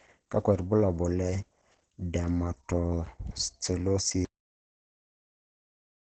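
A speech clip that sounds muffled and hoarse all the way through, with nothing above about 9 kHz. That's likely Opus compression in its SILK speech mode, fitting a low bitrate around 16 kbps. Then there's a cut-off end at 4.25 s, where the sound stops mid-stream and drops straight into digital silence with no decay at all.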